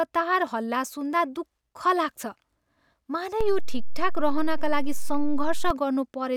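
At 3.41 s the waveform's zero line jumps by about -19 dBFS, a DC step like a converter recalibrating or an offset input switching in; it holds until 5.70 s and then steps back, giving a low thump at each edge while the speech carries on unchanged.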